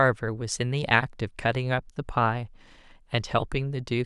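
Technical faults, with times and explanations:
Nothing technical gets in the way of the speech here; there's no fault to point to anywhere in the recording.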